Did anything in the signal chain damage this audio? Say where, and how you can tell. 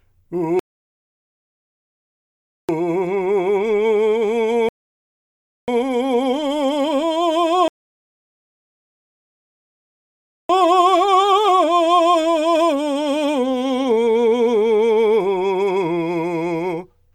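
Yes, rebuffering stalls at playback: the music drops to silence at 0.59–2.69 s, 4.69–5.68 s and 7.68–10.49 s, adding 2.1 s, 1.0 s and 2.8 s, then resumes exactly where it stopped. On a waveform and spectrogram these show as clean blank gaps with no loss either side.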